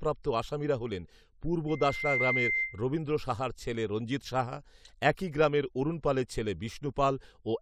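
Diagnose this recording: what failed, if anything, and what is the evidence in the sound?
A loudspeaker feedback squeal in the analogue reinforcement chain runs from 1.68 to 2.83 s, ending just before "রবীন্দ্র সাহার ছেলে রঞ্জিত". A single 2.1 kHz tone swells over about half a second to roughly 5 dB above the speech, because the microphone-to-loudspeaker loop gain exceeded unity at that frequency.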